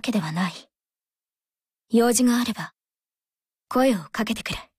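No technical faults can be heard anywhere in the audio, and the signal stays steady and intact throughout.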